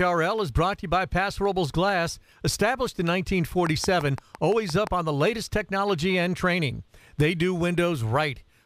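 From 3.67 s to 4.88 s, a train of clicks rides over the sound. About seven similar pulses arrive evenly, 5.8 per second, standing roughly 10 dB above the signal. They tick through pauses too. Interference from nearby equipment is the likely cause.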